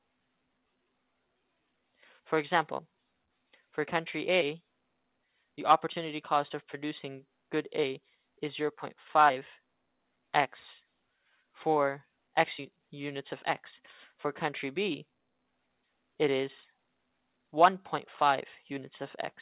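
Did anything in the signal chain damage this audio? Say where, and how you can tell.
No, nothing in the chain damaged it; the only mark is the call path's narrowband limit, with nothing above 4 kHz, which fits a G.711 A-law link at 64 kbps working as designed.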